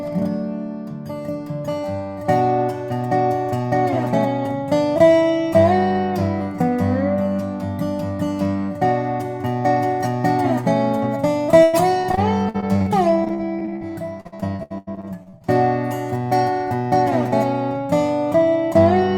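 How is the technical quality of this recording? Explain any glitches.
Two bursts of repeated packet loss (robotic sound) mar the recording, at 11.63 to 12.88 s and again at 13.24 to 15.42 s. Packets went missing or arrived too late, one after another, and each hole was bridged by stretching out the last received sound. Roughly a quarter of the first stretch and about 29% of the second is patched this way, with dropouts up to about 97 ms in the first burst and 86 ms in the second, so the sound turns choppy, with pieces missing.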